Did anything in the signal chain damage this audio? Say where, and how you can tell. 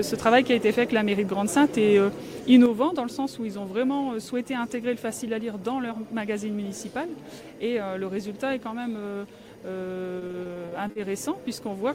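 Yes. A faint, steady chirping warble sits behind the sound for the whole clip, flipping between pitches near 1 and 2 kHz at about 35 dB below the programme. This is timecode bleed in the analogue wiring: linear timecode at 23.976 frames per second is leaking from an adjacent cable or track.

From 2.66 s to the end, the level abruptly falls by about 6 dB and is otherwise unchanged. That pattern is what one channel dropping out produces. The likely cause is a lost stereo channel before the mono fold-down, so the shared material halves.

Between 10.19 and 10.97 s the sound turns choppy and robotic, with short pieces missing. The holes are up to 40 ms long, and concealment fills about 28% of the stretch. This is repeated packet loss on the network, where each gap is patched by stretching the last received audio.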